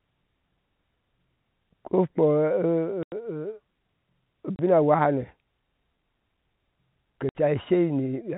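Packet loss filled with silence chops the speech at 3.03–3.12, 4.56–4.59 and 7.29–7.35 s: dead holes of 90, 30 and 60 ms, multiples that fit 30 ms packets, not smoothed-over concealment.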